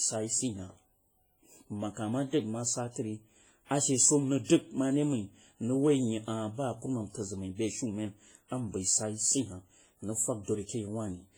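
It's a speech clip, and all the way through it has that ringing, washy character with a hiss that swells and fades along with the voice, which points to heavy WMA compression as the likely cause. The damage sounds like a low bitrate, around 24 kbps: the transform blocks smear quantisation noise over tens of milliseconds, and the weaker spectral detail gets zeroed out, even though content still reaches up to about 21 kHz.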